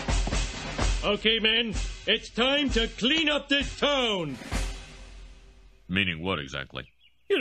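From 0 to 4.0 s, the adaptive stream starts at a low bitrate. Nothing sounds above 8.4 kHz, fitting about 32 kbit/s MP3. Quality then jumps, without a gap, to something like 128 kbit/s.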